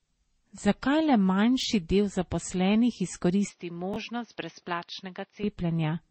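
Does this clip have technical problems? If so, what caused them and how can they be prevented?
Yes. Three kinds of fault are audible in this speech clip.

The whole clip shows artefacts of transcoding between lossy codecs. Nothing is present above 8.4 kHz. The mixed artefacts likely come from a low-bitrate MP3 encode followed by a Vorbis encode at a similar rate, with each stage adding its own damage. Prevention: keep a lossless master and encode only once, directly from it.

Chunks out of order occur at 1.60–1.64 s, just before "del zaposlenih", and at 3.94–3.96 s. Both are brief jumbled moments with hard joins. The 11.6 ms blocks fit 512-sample buffers at 44.1 kHz, with a block played two positions late, then one position late. Prevention: sequence-number buffers and reorder them before writing.

The input switched to a poorer device from 3.49 to 5.44 s, right after "del zaposlenih", with no silence at the change. 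The band drops to nothing above 6.2 kHz, the level falls by roughly 10 dB, and new background noise sits roughly 40 dB below the signal. This is likely an automatic fallback to a headset call profile. Prevention: lock the input device and disable automatic switching while recording.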